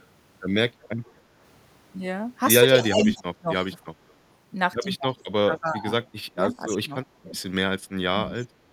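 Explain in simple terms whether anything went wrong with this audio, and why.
A delayed copy of the speech trails behind it from 0.0 to 1.12 s, 2.83 to 3.17 s, 4.08 to 4.14 s, 5.16 to 5.83 s and 8.35 to 8.44 s, arriving 294 ms late and loudest around 3 s. This is echo leak, likely from a loudspeaker whose echo canceller let sound slip back.

The main voice also dips or cuts out in pieces from 2.81 to 3.77 s, 5.44 to 7.37 s and briefly at 8.37 to 8.43 s, while the other side is talking. This is speech suppressed in double talk, likely because the echo canceller turned everything down when it couldn't separate the two.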